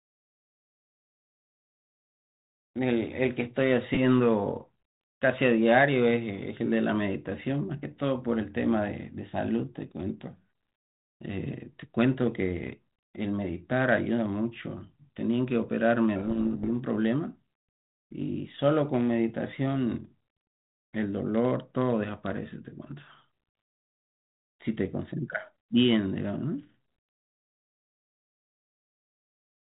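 From 16.16 to 16.80 s there is a codec payload misread. The G.726 code words arrive with their bit order reversed. The decoder still accepts them, but most values come out wrong. For about 0.64 s the speech is buried in harsh distortion.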